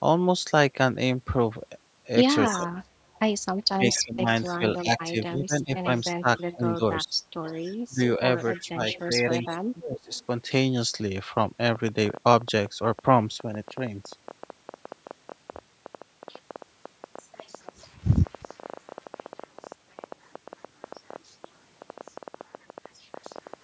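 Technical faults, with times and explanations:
2.47–10.13 s, speech suppressed in double talk: the voice repeatedly dips by as much as about 25 dB, for around three seconds in all, while the other side talks. This is likely an echo canceller that cannot separate local speech from loudspeaker echo and turns both down.
2.48–6.42 s, 7.46–9.04 s and 10.13–10.24 s, echo leak: a copy of the voice returns 281 ms late, first about 10 dB below the speech, then about 25 dB, then about 35 dB below. This is likely loudspeaker pickup that the loudspeaker side's canceller did not fully remove.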